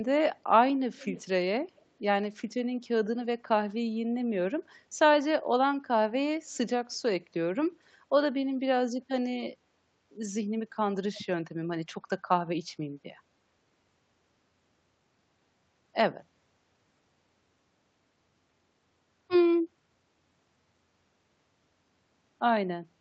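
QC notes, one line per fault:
0.96–1.24 s, 1.70–1.86 s, 11.14–11.21 s: echo leak. A faint delayed copy of the speech, about 20, 35 and 25 dB below it, trails by 280 ms in the first two and 325 ms in the third. It is likely a far-end loudspeaker copy that the echo canceller missed. Unlike room reverb, it is a distinct repeat, not a smooth decay.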